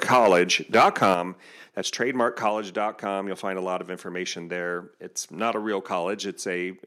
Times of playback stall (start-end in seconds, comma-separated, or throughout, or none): none